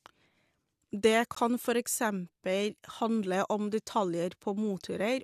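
At 1.35 s the speech drops into a short hole of dead silence, about 15 ms long, right before "kan for eksempel handle". That's a gap between stream segments: the timestamps of two neighbouring chunks don't quite meet, and the player fills the missing stretch with silence. The edges are hard, so it sounds like a tiny clean dropout. Nothing is cut from the speech itself. It just gets pushed back by that sliver of time.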